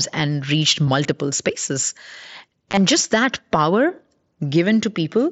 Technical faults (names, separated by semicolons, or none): concealed Bluetooth headset packet loss